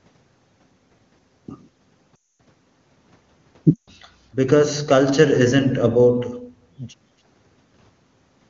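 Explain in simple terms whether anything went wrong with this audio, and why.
Lost AMR speech frames at 2.16–2.37 s and 3.74–3.90 s: the decoder stretched the last good sound, so the speech fades to silence, then returns weak before HD Voice clarity resumes.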